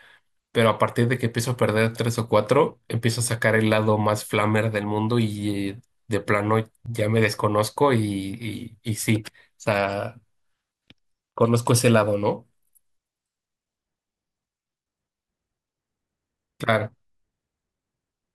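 At 2.84 to 2.86 s, 6.86 to 6.88 s and 10.88 to 10.90 s, the speech stutters briefly, the mark of overlapping chunks. The audio was handled in 4.0 s blocks, each beginning 20 ms before the previous one finished, so that sliver plays twice at every join. On a waveform, each seam shows a short duplicated segment with a step discontinuity; on a spectrogram, a thin vertical broadband click line recurs every 4 s.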